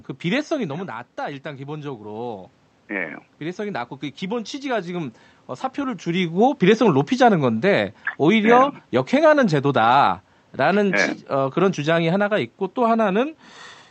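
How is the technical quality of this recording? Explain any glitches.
The speech has two slow level corrections from automatic gain control, each following a change in the talker's distance from the microphone. The sound has passed through a call path whose highs stop near 8 kHz, which points to a wideband Opus setting.

From 0.53 to 2.56 s there is automatic gain rising. Just before it, at about 0.5 s, the talker moves back and the input drops by about 9 dB. The gain control sees a quiet signal and raises its gain by about 4 dB over roughly two seconds. The voice climbs back gradually, and the room noise swells with it, because the gain applies to everything the microphone picks up.

From 6.8 to 10.99 s there is automatic gain falling. Around 6 s the talker moves. The gain control reacts slowly. Then over about four seconds the gain drops by about 3 dB and the voice settles lower. The background sinks with it, which shows that the level change comes from the gain stage rather than the talker.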